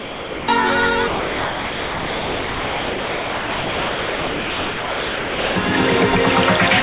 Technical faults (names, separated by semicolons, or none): sound dropped by the voice detector